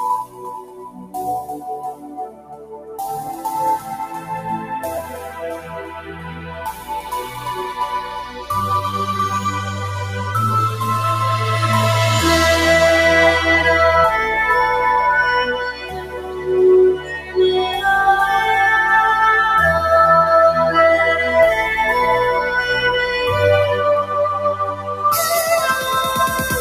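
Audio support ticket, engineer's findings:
Noise suppressor applied to music or sounds, throughout: speech-tuned suppression treats sustained content and tails as noise, so level pumps and thins, swinging around 10 dB.

Sound cut by the noise suppressor at 0.25–1.16, 1.93–2.99, 5.04–7.39, 8.27–8.46, 15.5–16.51, 16.93–17.38 and 24.03–25.05 s: held or decaying sound pulled down, deepest about 13 dB; onsets survive.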